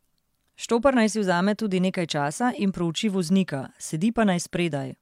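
No technical faults are audible.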